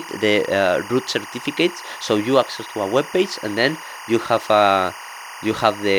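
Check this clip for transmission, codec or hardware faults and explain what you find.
A steady chirping warble runs behind the speech for the whole clip, sitting roughly 15 dB below it. This is timecode bleed. A linear timecode signal from a neighbouring track or cable has leaked into the audio path. That code is a square wave that flips between two pitches near 1 kHz and 2 kHz as it encodes each bit. The resulting rhythmic, buzzy twitter fits timecode running at 23.976 frames per second.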